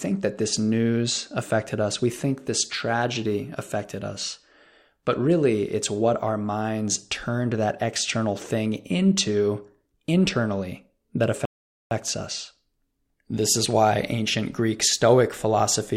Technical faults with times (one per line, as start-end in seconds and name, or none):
11.45-11.91 rebuffering stall